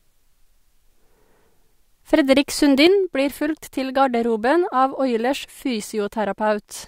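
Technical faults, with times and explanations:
2.87 to 6.88 s, sudden gain jump: speech and background noise drop together by about 6 dB in one step, with no fade. A gain setting was likely applied without a ramp.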